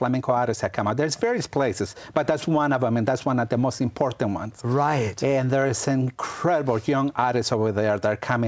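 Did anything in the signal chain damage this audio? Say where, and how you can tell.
Yes, at the clock boundary between sender and receiver. The sender's sample clock runs around 4 percent faster than the receiver's, so the jitter buffer keeps filling with more audio than it plays out. Nothing in the sound breaks outright. Instead, the whole clip carries a faint, recurring unsteadiness in timing. The top stops cleanly at 8 kHz, which fits a G.722 wideband call path.

The repeated timing corrections are the receiver's response to that drift. They run from 0.15 s to about 8.45 s. To stop its buffer overflowing, the receiver keeps trimming short slices of audio, which amounts to playback at 104 percent pace. Every edit is a cut in the same direction, spaced unevenly, so any trace they leave is small hiccups or a slightly uneven tempo.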